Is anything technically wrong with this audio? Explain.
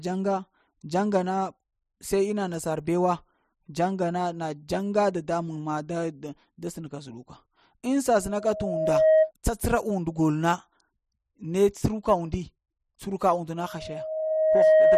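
Yes. Loudspeaker feedback squeal at 8.20–9.32 s and again from 13.57 s to the end, just after "tsuruka und": a steady 629 Hz tone swells over about a second to roughly 10 dB above the speech. The microphone is picking up its own loudspeaker, and the loop gain exceeds one at that frequency.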